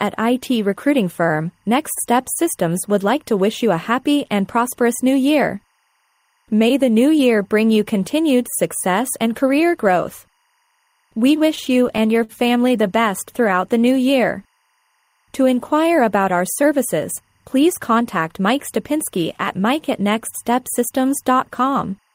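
Throughout, a faint timecode bleed sits about 45 dB below the sound: a 24 fps linear code leaking in, warbling between tones near 1 and 2 kHz.

From 11.47 to 12.32 s, repeated stalls (stutter) occur as the jitter buffer keeps emptying. Last sound is stretched across gaps up to 50 ms, dragging without losing material.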